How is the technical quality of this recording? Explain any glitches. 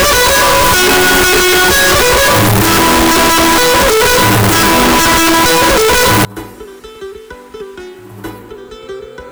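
Poor for the first 6.25 seconds. From 0.0 to 6.25 s there is a signed and unsigned mix-up, likely in how the 8-bit samples are read. The top bit flips, so each zero crossing jumps across the whole range. That gives very loud, harsh distortion. Quiet passages come out as loud as the rest. After 6.25 s the harsh distortion stops.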